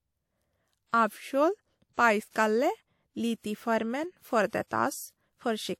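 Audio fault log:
4.67–4.71 s, pre-echo: a short hiss rises about 42 ms before a sharp speech onset, whose attack then sounds blunted. The codec block's quantisation noise, sized for the loud attack, fills the silence ahead of it. Unlike reverb or echo, the smear precedes the sound rather than trailing it.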